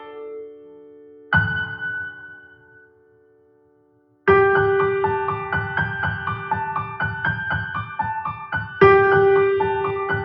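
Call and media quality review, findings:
Level pumps and flutters across the whole clip; held sound and decays sink while attacks pass. Speech-tuned noise suppressor applied to music or sounds, reading steady tone and ambience as noise. Gain swings around 20 dB.

0.00–1.32 s: sound cut by the noise suppressor. Sustained material dips by as much as about 18 dB and its tail is clipped short. Same suppressor misclassifying steady content as noise.

2.31–4.26 s: sound cut by the noise suppressor again. Held sound drops up to about 18 dB and decay truncates while transients survive. Suppressor gain clamps on the steady portions.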